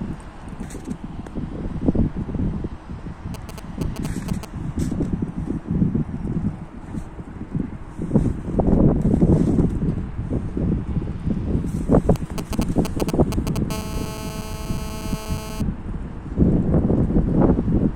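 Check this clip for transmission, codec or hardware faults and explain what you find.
Two kinds of radio interference from a nearby 2G phone appear, both at a 217 Hz burst rate.

GSM signalling bursts, 3.34 to 4.45 s (roughly 10 dB below the signal) and 12.16 to 13.58 s (roughly 5 dB below): galloping dit-dit-dit ticks and brief buzzes, from the phone's short signalling transmissions being rectified in the audio circuit.

GSM phone buzz, 13.70 to 15.62 s, about 13 dB below the signal: a hard, raspy, harmonic-rich 217 Hz drone as the phone's continuous call transmission is rectified.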